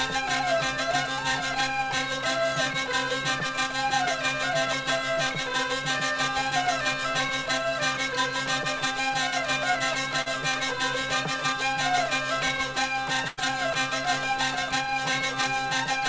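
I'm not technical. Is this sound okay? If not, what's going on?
No. At 10.22 to 10.28 s there is a short concealed packet loss: about 40 ms of the call never arrived, and the receiver papered over it by stretching the sound just before, so you hear only a quick smear or wobble, not an actual gap.

At 13.28 to 13.39 s there is a burst of packet loss, roughly 100 ms missing in a row. It lasts longer than the first fault, so the patch-up becomes a held buzz or fading hiss, then the sound jumps ahead with a piece gone.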